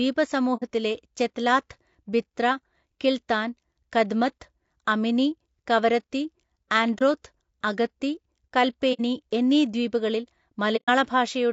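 Across the whole speech clip the voice sounds rough and grainy, with a noisy fill between the harmonics and a thin, somewhat synthetic top band. This points to low-delay AAC compression, likely AAC-ELD as used in video calls, at a rate that fits about 32 kbps. It codes about 500 frequency lines a frame with a low-delay window, and at this rate the damage is plainly audible.

AAC frame loss with muting occurs four times. The first is at 0.57 to 0.63 s, just before "ചെത്ലാത്ത് ബിത്ര കിൽത്താൻ കദ്മത്ത്", and the second at 6.98 to 7.02 s. The third is at 8.93 to 9.00 s, just before "എന്നീ ദ്വീപുകളിൽ", and the last is at 10.76 to 10.90 s, right after "എന്നീ ദ്വീപുകളിൽ". The missing audio amounts to about 60, 30, 60 and 120 ms respectively, which fits whole decoder frames of roughly 30 ms going missing. The decoder zeroed their spectrum, and the overlapping windows fade the sound down and back up, so the single lost frame is a brief dip and the longer runs are soft-edged holes.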